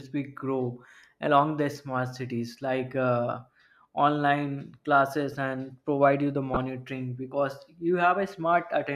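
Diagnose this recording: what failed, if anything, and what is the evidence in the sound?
The codec stage failed: corrupt frames were decoded and played instead of being concealed. Flipped bits made the decoder misread gains and spectral codes, so energy landed at the wrong frequencies for the span of each damaged frame. At 5.32 s, just after "like uh online", a single frame gives a faint blip. From 6.54 to 6.60 s, after "provide you the", what sounds like a few consecutive frames give a much louder chirp-like burst.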